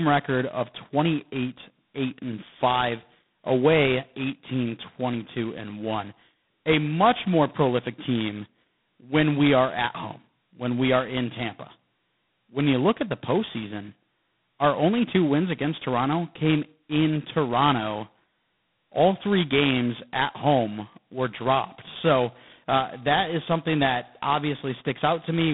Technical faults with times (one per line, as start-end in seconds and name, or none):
0.00-25.54 G.726 ADPCM